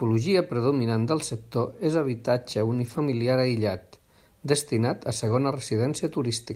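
At 2.85 to 2.99 s, after "del sector és habitatge", and at 5.27 to 5.33 s, after "aïllat destinat a", lost packets were rebuilt from error correction. The decoder played low-bitrate redundant copies of the missing audio, about 80 ms and 40 ms long, so the speech continues without a gap but sounds rougher and noisier there.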